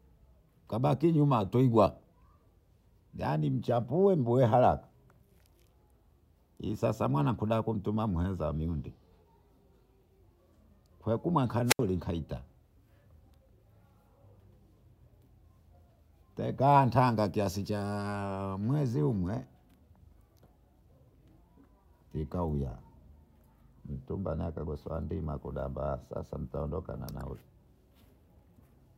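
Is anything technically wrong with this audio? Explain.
Yes. Between 11.65 and 11.80 s the speech is briefly overtaken by a rush of hiss, then falls into a gap of near silence lasting about 72 ms before returning. This is a wireless microphone squelch dropout: the analogue FM radio signal faded so far that the receiver's squelch muted its output.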